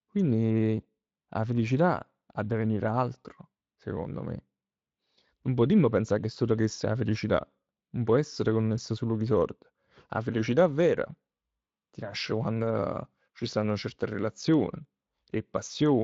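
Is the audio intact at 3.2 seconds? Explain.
Yes, the audio is intact at 3.2 seconds, with no fault at that moment.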